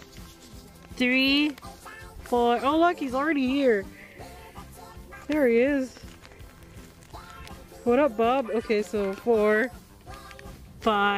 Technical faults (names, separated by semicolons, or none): none